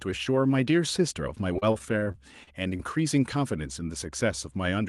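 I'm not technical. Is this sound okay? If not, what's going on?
No. From 1.53 to 2.81 s the speech turns choppy and robotic. That's repeated packet loss: nine short dropouts, each patched by stretching the sound just before it.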